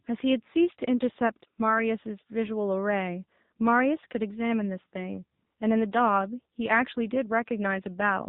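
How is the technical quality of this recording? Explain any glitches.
The recording has poor technical quality: the speech has passed through AMR narrowband mobile coding for the whole clip. The audio was squeezed into an 8 kHz-sampled phone channel, where each 20 ms frame is rebuilt from a vocal-tract model excited by a handful of pulses. The heavy damage points to a low AMR-NB mode, around 6.7 kbps. As a result, nothing above 4 kHz survives, so the speech sounds dull and boxed-in, and the sparse pulse coding makes it buzzy and synthetic.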